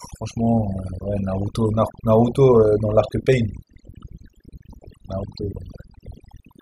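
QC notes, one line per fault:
Throughout, overdone noise removal: the noise reduction was set too aggressive for this speech, so any frequency band that dips near the estimated noise floor is pulled far down or gated off. Low-level speech detail is removed along with the noise, leaving near-silent gaps with twinkling specks. On a spectrogram, the background is mostly black with scattered isolated bright dots, and the speech harmonics look patchy and ragged at their edges. On the waveform, pauses sit almost flat.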